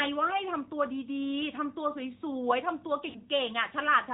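Throughout, the audio has passed through the AMR narrowband mobile codec, which samples at 8 kHz and rebuilds the signal from a vocal tract model excited by a sparse set of pulses. Nothing above 4 kHz survives, so the speech sounds boxed in and thin. The plainly audible buzzy, synthetic edge points to a mid-range AMR-NB mode at around 10.2 kbps.

From 3.10 to 3.18 s, lost AMR speech frames break the flow. Frames arriving with failed checksums forced the decoder to conceal the gap by repeating its last good pitch and vocal tract settings while lowering the gain. That 40 ms gap fits two lost 20 ms frames. It is heard as a short smeared, warbling stretch that sags in level, with the speech returning weak or rough for a moment.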